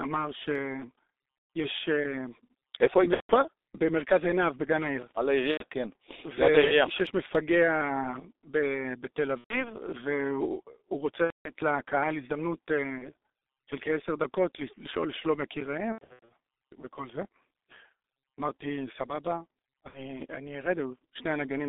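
Throughout, the G.723.1 codec at about 6.3 kbit/s squeezes the speech into a 250 Hz to 3.7 kHz band. It sounds muffled and hoarse, and the spectrogram shows empty space above 3.7 kHz and smeared consonant energy.

VoIP packet loss concealed by the speech codec hits at 1.58, 3.14–3.32, 5.52–5.64, 9.38–9.74, 11.24–11.51, 12.98–13.06, 15.92–16.31 (scattered gaps) and 19.88–20.22 s. The decoder stretches the last sound into a fading buzz or coloured noise, which appears as smeared energy over a decaying envelope.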